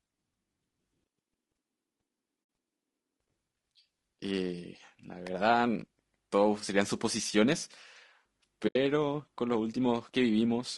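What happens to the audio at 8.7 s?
At 8.67 s the speech drops into a brief, soft-edged hole lasting until 8.76 s. This is AAC frame loss with muting. The decoder zeroed the missing spectrum, which fits about four lost frames. Overlapping windows fade it out and back in. Around it the speech sounds rough and grainy, with noise between harmonics, likely from low-delay AAC compression at about 32 kbps.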